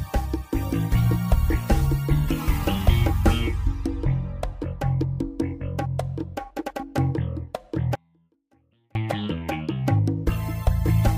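An audio dropout to a faint residue runs from 7.95 s to 8.95 s, losing about one second of signal. The gap holds only a faint leak of the sound, around 35 dB below normal, with abrupt edges, likely from a brief signal break upstream while the downstream path stayed live.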